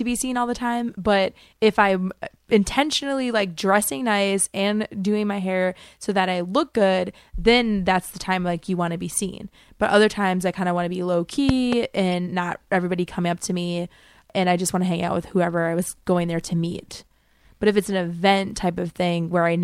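At 8.23–8.25 s, right after "good then that's the", a corrupt frame decoded gives a faint chirp: damaged compressed data got played anyway, putting energy at the wrong frequencies. At 11.49–11.75 s, after "want to be low", a loud pop hits twice, sharp and well above the speech, likely from a voltage spike from a plug, switch or static. Two more corrupt-frame blips follow, a louder one at 12.12–12.15 s just before "not everybody coming up", and a longer, louder noise burst at 15.83–15.88 s.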